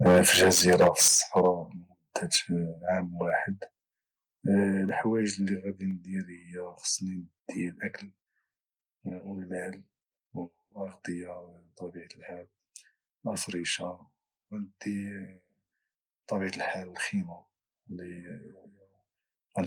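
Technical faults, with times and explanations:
0.05–1.48 s and 2.34–2.37 s, microphone overload: peak tops are flattened, giving a harsh crackling edge. The first stretch is about 12 dB over, with roughly a sixth of samples cut. The second is about 3 dB over, with only a few percent cut. The likely cause is input volume set beyond the converter's limit.
0.07 s, 1.08 s, 4.89 s, 5.91 s, microphone volume stepped down: voice and background drop abruptly by about 2, 8, 5 and 2 dB, each likely a single software reduction of input level.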